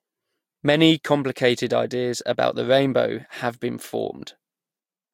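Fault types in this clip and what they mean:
No technical faults can be heard in this speech clip. Nothing in the audio points to a problem in how it was captured or delivered.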